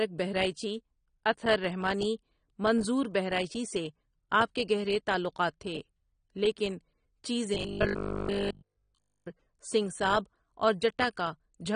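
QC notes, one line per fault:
throughout: AAC compression, plainly audible smearing and dullness, likely from AAC-LC at a low bitrate near 32 kbps; the spectrogram shows a hard ceiling with nothing above 9.7 kHz.
7.55 to 9.27 s: robotic sound from repeated short buffers, a rigid 50 Hz buzz over essentially the whole stretch, likely from re-playing 20 ms chunks; the spectrogram shows 50 Hz-spaced comb lines and the waveform identical repeating blocks.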